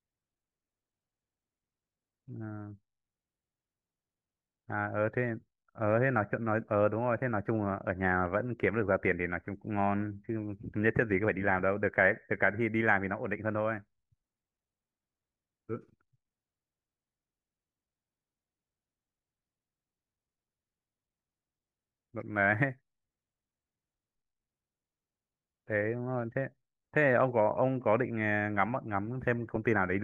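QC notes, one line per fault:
29.54–29.56 s, DAB burbling: a brief patch of watery blips near the end of the clip. Weak digital radio reception let bit errors slip past the error correction into the MP2 audio data. Corrupted samples put short blips of noise into single sub-bands, giving that watery texture. It points to a low error rate, about 0.07 percent.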